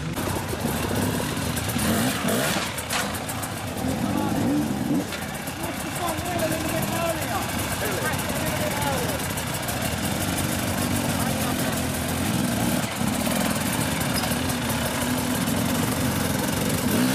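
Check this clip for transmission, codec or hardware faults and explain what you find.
No transmission, codec or hardware faults can be heard.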